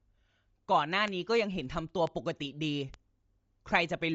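Speech whose whole length carries a breathy, grainy edge with nothing above 7.7 kHz, likely Bluetooth LC3 compression at a low rate, around 32 kbps with 10 ms frames. The noise-filled upper band sets it apart from plain low-pass filtering, which would sound dull but clean. Three bit error spikes sound as isolated sharp ticks at 1.08, 2.07 and 2.94 s. The one at 2.07 s spans three consecutive corrupted samples. Each tick is broadband, instant and unrelated to the speech, unlike codec frame glitches, which smear over several milliseconds.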